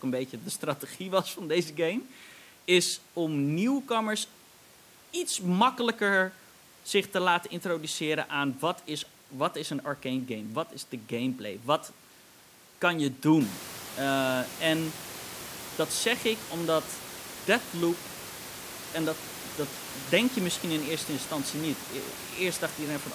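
No technical faults are audible.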